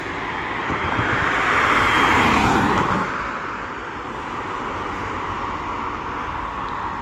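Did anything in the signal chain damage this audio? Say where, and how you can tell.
Yes, at the codec stage. Across the whole clip there's a layered smeary, swirly coding texture, two kinds of artefact stacked, with content reaching up to 20.1 kHz. That points to transcoding between lossy codecs, likely Vorbis around 63 kbit/s re-encoded to Opus around 32 kbit/s, each pass adding its own damage.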